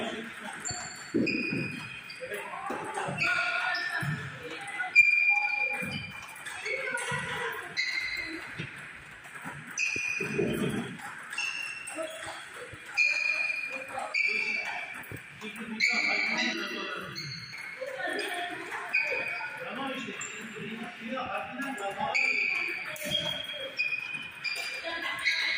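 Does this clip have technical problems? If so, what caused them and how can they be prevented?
Yes. From 16.53 to 17.53 s there's channel delay (comb filtering): one channel trails the other by under a millisecond, and summing to mono cancels a series of evenly spaced frequencies starting around 700 Hz, so the sound turns hollow and phasey. Keep both channels time-aligned before any mono fold-down.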